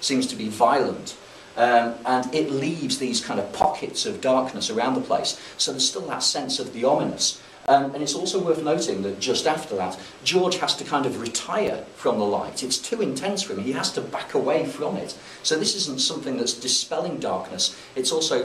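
The sound drops out four times in short, hard-edged holes of silence: at 3.62 s (about 17 ms), from 7.66 to 7.68 s (about 22 ms), at 11.67 s (about 6 ms), and at 15.67 s (about 3 ms). They recur roughly every 4 seconds, the signature of a gap between stream segments. The timestamps of adjacent 4-second segments fail to meet, the player pads the shortfall with silence, and the sound resumes where it left off.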